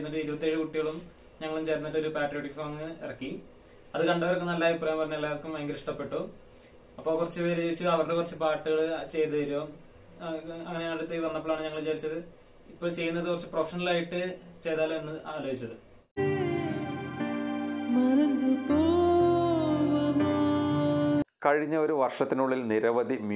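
No technical faults can be heard anywhere in the recording. Nothing breaks up, drops out or shifts at any point in the audio.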